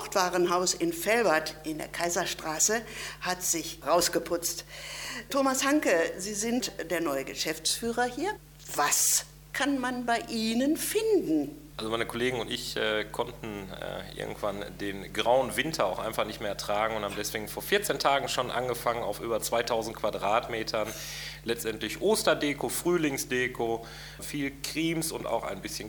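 No technical faults are audible anywhere in the recording.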